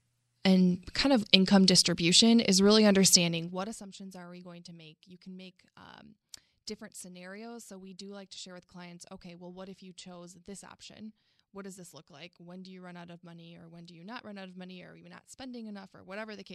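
From 3.18 to 3.89 s, between "income distribution is really" and "are we going to", zipper noise: the level drops by roughly 25 dB in unsmoothed steps, around seventy per second, each leaving a small click, so a fast ticking rides on the speech during the fade.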